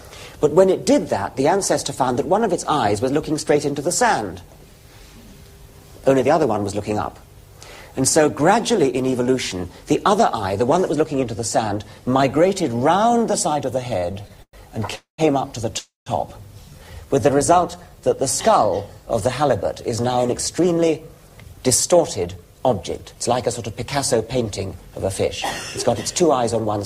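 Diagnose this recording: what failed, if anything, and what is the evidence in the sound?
Channel delay (comb filtering) sits at the sum-to-mono stage, from 10.58 to 12.09 s. One channel lags the other by a tiny amount, which fits a single-sample offset. Summing then cancels high content, with the first notch near the top of the audible band. The result is a slight dullness.

Repeated stalls (stutter) point to the network and jitter buffer, from 13.99 to 14.94 s. The audio catches nine times, with the longest hold about 111 ms. Roughly a quarter of that span is concealment. Late packets kept draining the buffer, so the receiver stretched the last sound. Nothing is lost.

Two call audio freezes follow, at 14.95 to 15.21 s and 15.78 to 16.09 s. Each holds the last sound, fades, then falls silent for 130 and 150 ms. Playback then resumes where it stopped. The likely cause is packets held up in transit, emptying the jitter buffer.

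A jitter buffer slow-down runs from 16.73 to 18.10 s. The audio plays at 91% speed with unchanged pitch, and sounds are drawn out. The receiver repeated pitch periods to add 135 ms of reserve.

A jitter buffer speed-up runs from 20.17 to 23.48 s and again from 26.21 to 26.78 s, both at 107% speed. The audio sounds hurried at the same pitch. The receiver trimmed short periods to shed excess delay, about 200 ms in the first stretch and 50 ms in the second.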